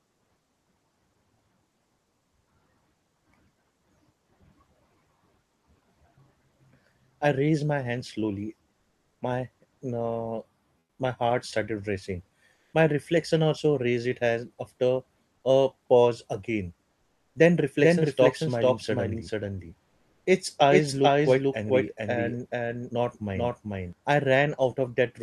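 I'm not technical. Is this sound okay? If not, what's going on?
No. There are two problems.

The first is comfort noise in place of the background. In short pauses, the real room sound is swapped for a flat, smooth hiss. This happens at 8.79 to 9.19 s and 10.79 to 10.99 s, just before "my heart started racing". It happens again at 12.53 to 12.73 s, just after "my heart started racing". Then at 17.01 to 17.35 s, after "after a pause again", and at 19.85 to 20.25 s. The likely cause is the call system. It stops sending sound when nobody is talking, and the receiving end fills the gap with fake noise.

The second is a doubled audio track, from 17.81 to 23.93 s. A second copy of the sound plays about four-tenths of a second behind the first, at roughly the same loudness. It sounds like a crisp, clean repeat, not a room echo. It also switches on and off abruptly. The likely cause is the same sound being picked up twice through a slower route.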